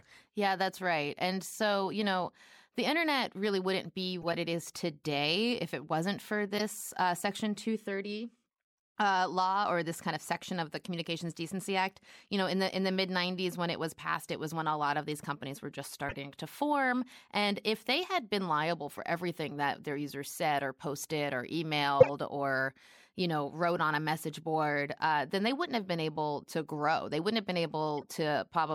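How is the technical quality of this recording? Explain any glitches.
The speech is marred by six short bursts of corrupt frame decoded damage, at 4.22–4.34, 6.57–6.61, 16.09–16.17, 18.91–18.99, 22.00–22.09 and 27.98–28.04 s. In each one, flipped bits in a few compressed frames got decoded anyway, so garbled gains and codes dump energy in the wrong frequency bands for roughly 40 to 130 milliseconds. You hear chirpy, noisy blips. The one at 22.0 s is the nasty one, peaking around -5 dBFS, while those at 18.9 and 28.0 s sit much lower, down around -35 to -40 dBFS.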